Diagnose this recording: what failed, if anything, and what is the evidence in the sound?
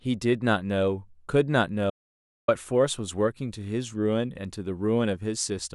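Audio dropout to silence from 1.90 to 2.48 s: the speech cuts to silence with no room tone for 0.58 s, likely an input or link loss while writing continued.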